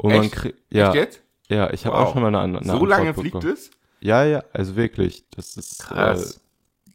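Overlap-add ripple from 4.83 s, after "ja also", to the end: frames rejoined with uneven overlap gain pulse about 11 dB, roughly 40 times a second.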